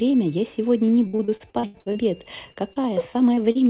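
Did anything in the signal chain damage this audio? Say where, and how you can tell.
Yes, at the network stage. Repeated packet loss (robotic sound) runs from 1.07 to 2.79 s: thirteen gaps, the longest 79 ms, each patched by stretching the previous sound. The spectrogram shows frozen, smeared harmonic bands with hard seams. The waveform repeats near-identical cycles.

Two short concealed packet losses follow, at 3.34 to 3.40 s and 3.52 to 3.58 s, each about 30 ms. They are heard as a quick smear or wobble. In the waveform, the last sound is continued briefly and then crossfades back into the real signal, leaving a narrow blurred column on the spectrogram.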